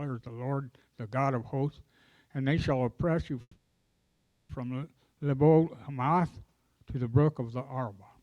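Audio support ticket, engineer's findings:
Call audio freeze, 3.41 to 4.51 s. Last sound held as a fading buzz, brief silence of about 40 ms, then audio resumes where it stopped. Nothing lost; roughly 1.08 s inserted, delay now 1.08 s longer. Likely cause: held-up packets draining the jitter buffer.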